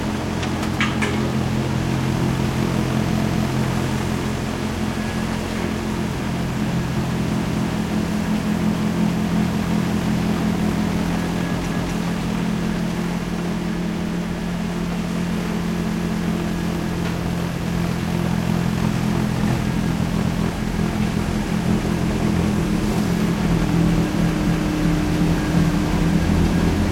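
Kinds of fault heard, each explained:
Overlapping chunks: the audio runs in 4-second pieces, each starting 250 ms before the previous one ended, so a short stretch plays twice at 3.22, 7.47, 11.72, 15.97, 20.22 and 24.47 s. Unlike a dropout, nothing is lost. The sound stutters by repeating itself.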